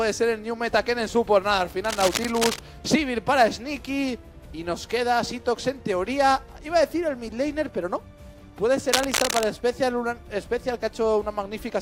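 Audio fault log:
1.84–2.59 s and 8.93–9.44 s, cable scratch noise: a worn cable or connector was likely being moved, its contact resistance jumping rapidly, so dense, uneven crackling bursts rasp over the sound, the first slightly below the sound's level, the second roughly as loud.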